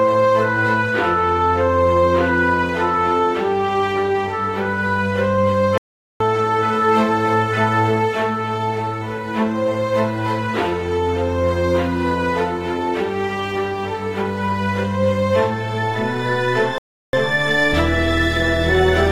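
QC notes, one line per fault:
5.78–6.20 s, playback stall: the sound cuts to silence for 0.43 s mid-flow, then resumes, likely because the player's buffer ran dry or its thread blocked.
16.78–17.13 s, playback stall: output drops out for 0.35 s and then picks up again, likely from the player briefly starving of data before recovering.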